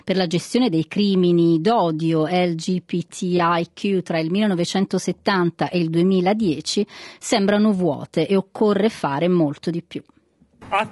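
From start to finish, the speech carries plainly audible coding damage. It is likely low-delay AAC compression, the AAC-ELD type used for video calls. This codec works in very short frames. Short frames cannot separate the pitch harmonics well. The damage fits a rate of around 32 kbps. Voices sound rough and grainy. Noise fills the gaps between harmonics, and the top band sounds dull or synthetic.

At 3.37 to 3.40 s comes a brief AAC frame loss with concealment. The gap is about 20 ms, which fits one lost frame. The decoder covered it by rebuilding sound from the last good spectrum. It guessed at the detail it lacked. The result is a tiny smeared or noisy patch. It is too short to fade toward silence. Normal sound resumes at once.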